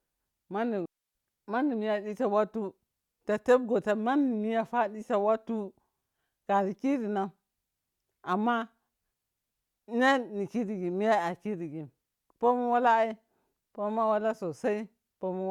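A digital wireless link lost too much data at 0.86 s, so the receiver muted: a clean 290 ms hole of near silence until 1.15 s, with no noise burst on either side.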